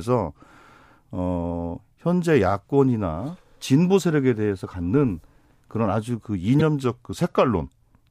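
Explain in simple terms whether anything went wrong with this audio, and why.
At 6.59 to 6.61 s there is a brief glitch from damaged data in a compressed stream. The decoder misreads corrupted bytes, unlike a clean edit or dropout.

From 6.84 to 7.98 s the speech slows by about 5.4% and drops almost a semitone. This is likely a drift correction step, with speed and pitch changing together, unlike a pitch-only effect.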